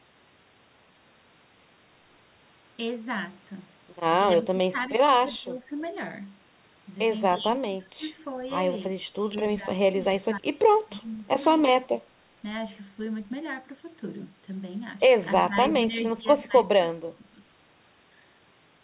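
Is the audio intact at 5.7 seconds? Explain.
No. From 5.40 to 5.72 s the speech is pulled down by roughly 15 dB at its deepest, which points to speech suppressed in double talk. The likely cause is an echo canceller that heard both sides at once and attenuated the near talker along with the echo. On a waveform the envelope sags over that third of a second. On a spectrogram the energy below the 4 kHz call-band ceiling fades across that span.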